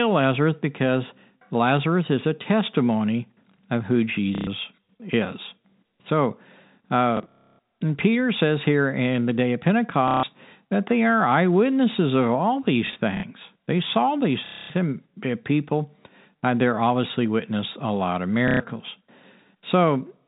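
Packet loss with last packet repeated occurs at 4.35–4.47, 7.17–7.59, 10.08–10.23, 12.87–13.23, 14.46–14.70 and 18.48–18.60 s. Lost packets were filled by replaying the previous one, which fits 30 ms packets. Each run stutters robotically with a buzz near 33 Hz. The G.711 telephone band stays below 4 kHz.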